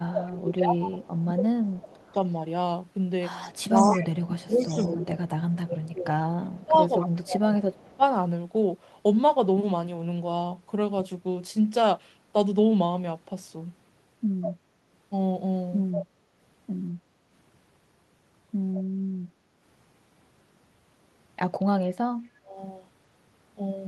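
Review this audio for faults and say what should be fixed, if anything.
Speech suppressed in double talk occurs from 0.00 to 2.01 s, from 3.69 to 8.03 s, and from 22.20 to 22.57 s. The speech dips by about 25 dB in the first two spans and about 30 dB in the last. Roughly one and a half seconds, three seconds, and under half a second are affected. The likely cause is an echo canceller that could not tell this talker from loudspeaker echo while both sides spoke, so it turned everything down. A canceller with better double-talk detection, or less aggressive suppression, would prevent it.

Echo leak is heard from 1.43 to 7.96 s, from 14.41 to 16.05 s, and briefly from 18.75 to 18.80 s. A copy of the speech trails it by 191 ms. It sits about 15 dB, about 10 dB, and about 20 dB below the direct sound. This is likely loudspeaker output that the loudspeaker side's microphone picked up and its canceller failed to remove. 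A headset, or a properly converged echo canceller on the loudspeaker side, would prevent it.

Background gated by the echo canceller appears at 19.44 to 19.48 s. The room sound dips by about 6 dB for 40 ms, then returns. The canceller clamped the microphone while the loudspeaker played and released it a moment later. Gentler suppression, or comfort noise filling the gap, would prevent it.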